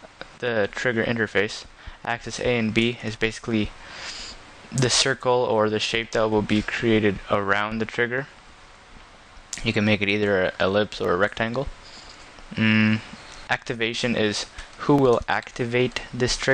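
A single sharp click sounds at 11.05 s, and another at 14.99 s. Each shows as a thin vertical line across the spectrum. The likely cause is dropped samples. Under a millisecond of audio goes missing, so the waveform jumps abruptly.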